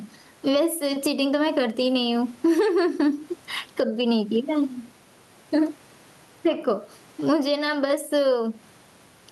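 A speech recording with gain pumping throughout: the gain keeps being pulled down on loud sounds, with a swing of roughly 15 dB. The likely cause is microphone gain set far too high with a fast limiter or compressor clamping down on every peak, squashing loud and soft passages toward the same level. On a waveform, the speech envelope looks flattened and uniformly dense. The background is room noise, which otherwise sits about 42 dB below the speech.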